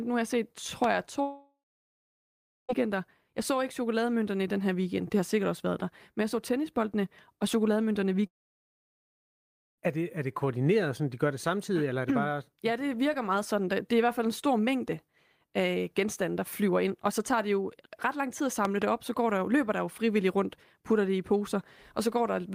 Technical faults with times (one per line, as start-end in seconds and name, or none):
0.84-0.86 loud pop
1.21-2.71 long network dropout
8.27-9.80 long network dropout
18.65-18.84 loud pop